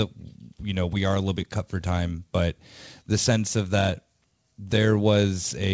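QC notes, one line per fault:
Nothing stood out on listening to this speech clip.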